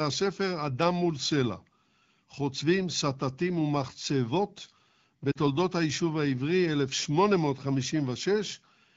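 At 5.31–5.37 s the speech briefly smears and dips. These are lost AMR speech frames: the decoder held its last good settings with falling gain for 40 ms.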